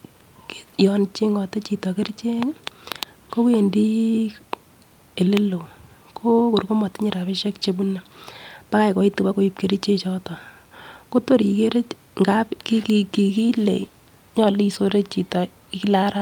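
No audible faults anywhere in this speech recording.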